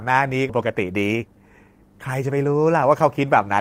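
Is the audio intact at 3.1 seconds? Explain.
Yes, at 3.1 seconds the speech plays through intact, with no dropout, click, distortion or other fault.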